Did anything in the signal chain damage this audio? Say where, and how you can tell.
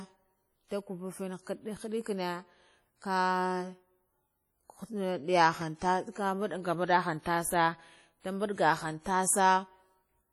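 Yes. The codec stage shows WMA compression throughout the speech: ringing, washy smearing around syllables and hiss that breathes with the signal. This is likely a transform codec whose long blocks spread quantisation noise. The heavy damage fits roughly 32 kbps, with bandwidth still reaching 20.1 kHz.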